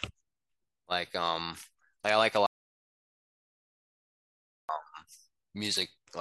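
At 2.46 s the speech cuts off abruptly and the track drops to silence, with no room tone or noise floor, until 4.69 s, when the sound resumes mid-flow. This audio dropout to silence removes about 2.23 s of material outright. The pattern points to the input signal being lost, likely through a disconnected device, a failed link or an accidental mute, while the recorder kept writing silence.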